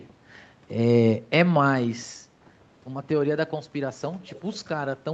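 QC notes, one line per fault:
4.22–4.54 s, echo leak: a faint repeat of the speech trails the original by about 0.44 s, roughly 25 dB down, likely a far-end loudspeaker pickup that echo cancellation missed; the spectrogram shows weak duplicate harmonic traces, time-shifted, and the waveform barely changes.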